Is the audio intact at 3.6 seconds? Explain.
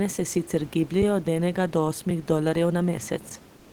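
No. From 3.57 s to the end of the clip at 3.73 s, the sender has likely stopped transmitting under discontinuous transmission, as in Opus DTX, and the receiver fills those 160 ms with comfort noise in place of the background. The room noise, about 27 dB below the speech, gives way to a steady, featureless hiss about 29 dB below the loud parts, roughly 1 dB quieter and missing the texture of the real room.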